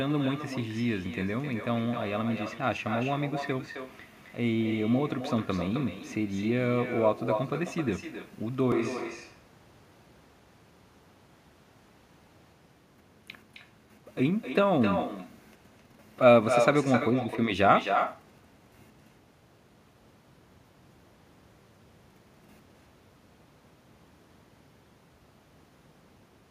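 Speech runs through the whole recording with an echo with no canceller. Every phrase is followed roughly 300 ms later by a quieter copy, about 8 dB below the direct sound, and thinner. That is a loudspeaker at the far end feeding the microphone there, with nothing removing it before it returns across the network. A discrete repeat this late is what sets it apart from room reverberation, which smears the sound without a separate delayed echo. From 8.72 s to 12.53 s the sound suddenly turns hollow and roomy with less bass, then snaps back just as abruptly. This is likely a switch to a distant microphone, with the close microphone's signal dropped in favour of one further away. Unlike the echo, it adds no delayed repeat. The tone changes at once while the level stays much the same, and faint room noise sits well below the speech.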